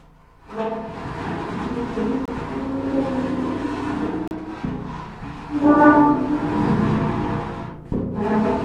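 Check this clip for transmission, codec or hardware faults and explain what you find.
There's one fault here, a gap between stream segments, showing up twice in this recording of sounds. At 2.25 to 2.28 s and again at 4.28 to 4.31 s, the timestamps of neighbouring 2-second segments don't quite meet, so the player pads the hole with silence, roughly 24 ms and then 35 ms. You hear a hard-edged dropout, but nothing's actually lost.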